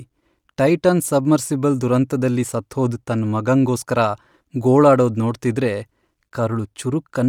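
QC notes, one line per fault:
Throughout: Bluetooth LC3 compression. The speech carries plainly audible codec damage for its full length, with a grainy, breathy edge on the upper part of the spectrum. This is likely the LC3 transform codec used by Bluetooth LE Audio. The codec splits the signal into short frames, and the texture fits 10 ms frames at a rate around 48 kbps. Too few bits are left for fine high-frequency detail, so the treble is coarsely approximated rather than reproduced.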